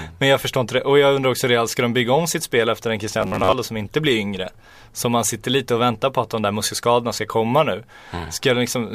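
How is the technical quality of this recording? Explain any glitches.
One glitch stands out: a short stretch of robotic sound from repeated short buffers, from 3.21 to 3.56 s, between "sitt spel efter en" and "som inte blir yngre". The speech there becomes a stiff, metallic buzz at about 94 Hz that still loosely traces the syllables. The likely cause is audio arriving too slowly, with the playback filling the gaps by looping the last fragment of about 10.7 ms, so roughly half the real speech is skipped.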